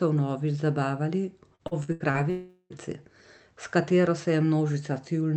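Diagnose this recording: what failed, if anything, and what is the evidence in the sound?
Right after "vnovič zabavali", from 1.55 to 2.17 s, the speech turns choppy and robotic, with five short holes up to 78 ms each. This is repeated packet loss at the network stage: the receiver stretched the last sound over about 240 ms of lost audio, nearly 40% of that span.

From 2.30 to 2.73 s the speech smears into a buzzing or hissing, fading continuation lasting about 0.4 s, with a brief silence before the audio resumes with that stretch missing. The likely cause is a long network dropout, with the concealment filling the gap.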